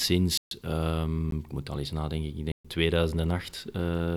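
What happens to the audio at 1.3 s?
At 1.31 s the speech drops into a block of digital silence lasting about 13.5 ms. The signal cuts straight to silence and comes straight back with no fade, so each edge leaves a hard step in the waveform, and the whole event is heard as a tick or dip rather than an audible hole. That abrupt zeroing sets it apart from a smoothed dropout, which would fade out and back in.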